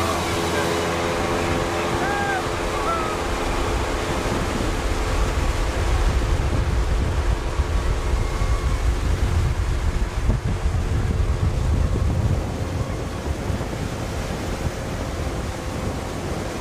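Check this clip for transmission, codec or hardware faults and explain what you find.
No transmission, codec or hardware faults turn up anywhere in this clip.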